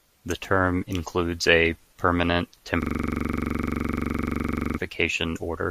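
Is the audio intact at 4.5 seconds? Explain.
No. At 4.5 s you're inside a system hang loop running from 2.82 to 4.78 s. The machine froze while the sound hardware kept replaying one 42.67 ms chunk of speech, which fits a 2048-sample buffer. It repeats 23.4 times a second, giving a rough, rattling buzz.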